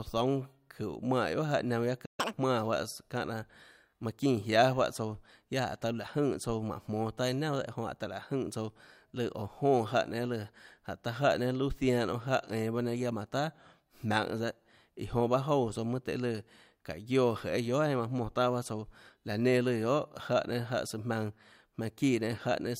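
Speech clip with a playback stall from 2.05 to 2.20 s: about 130 ms of silence, likely a starved or blocked player, and the sound resumes where it stopped rather than skipping ahead. A catch-up at higher speed follows from 2.20 to 2.33 s. It plays at 2x, so pitch jumps about ten semitones along with tempo, unlike a pure pitch shift, then snaps back to normal.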